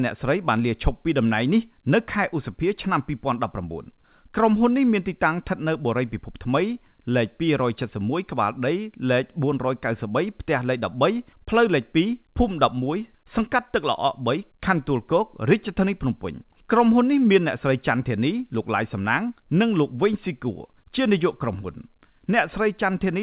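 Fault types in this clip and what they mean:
No faults can be heard in this speech clip. It has gone through a WebRTC call path with a G.711 A-law codec at 64 kbps, so nothing is present above 4 kHz.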